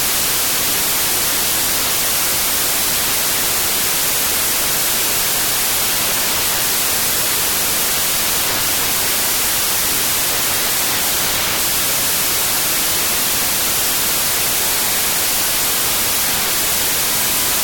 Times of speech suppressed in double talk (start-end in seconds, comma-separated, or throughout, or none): none